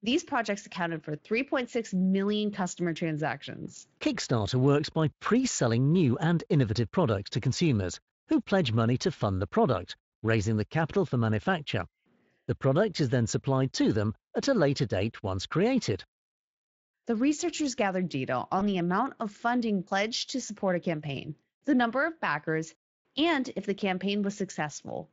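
Speech recording with one dropout: VoIP packet loss concealed by the speech codec at 18.59 to 18.63 s, where a 20 ms gap, consistent with a single lost frame, is filled by the decoder extending and fading its last pitch and filter, heard as a brief buzzy or noisy smear; the Speex coding underneath adds only light roughness.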